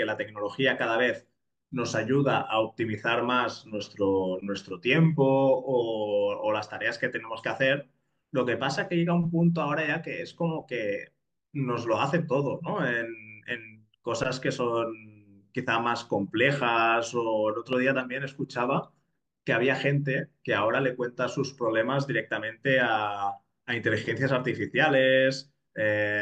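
At 17.73 to 17.75 s a single loud pop cuts across the speech, a sharp click-thump that stands well above the surrounding level, roughly 10 dB over it, while the talking carries on underneath. The likely cause is a sudden voltage step or spike, from a plug, a switch or static, entering the signal chain. On a waveform it shows as one tall, narrow spike; on a spectrogram, as a thin vertical stripe spanning the full frequency range.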